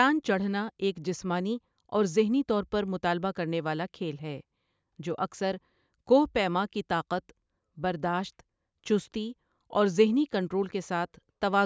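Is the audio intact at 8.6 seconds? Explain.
Yes, at 8.6 seconds the speech plays through intact, with no dropout, click, distortion or other fault audible at that moment.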